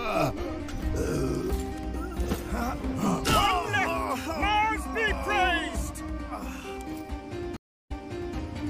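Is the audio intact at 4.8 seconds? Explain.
Yes, the audio is intact at 4.8 seconds, with no dropout, click, distortion or other fault to be heard at that point.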